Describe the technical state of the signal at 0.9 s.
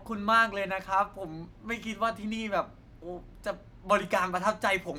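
At 0.9 s the speech signal is intact, with no audible fault at that moment.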